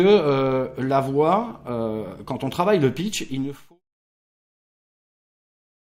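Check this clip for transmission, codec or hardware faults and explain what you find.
No transmission, codec or hardware faults turn up here; the smooth fade-out from around 3 s to 3.8 s is an ordinary edit.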